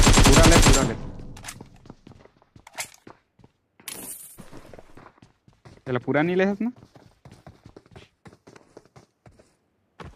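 No technical faults can be heard anywhere in this clip.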